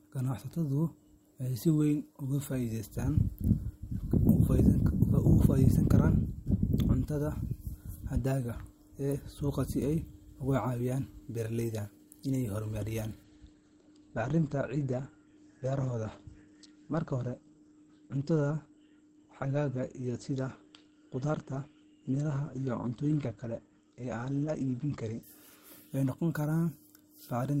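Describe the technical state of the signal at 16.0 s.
Dull, band-limited speech with nothing above 8.5 kHz and rising codec artefacts, starting abruptly at 13.23 s after "caawiyaan beeraleyda inay horumariyaan" and lasting until 25.23 s: an adaptive stream at a lower bitrate. The sound fits a switch from about 64 to 16 kbit/s Opus.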